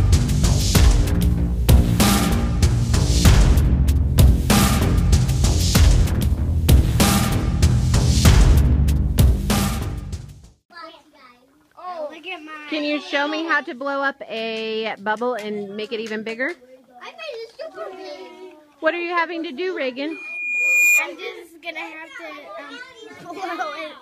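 From 20.10 to 21.07 s a loudspeaker feedback squeal rises at 2.4 kHz. The microphone re-amplifies the speaker's output until that frequency runs away. It swells over roughly 0.7 s to about 5 dB above the signal. On a spectrogram it is a bright horizontal line that thickens, and the waveform envelope bulges.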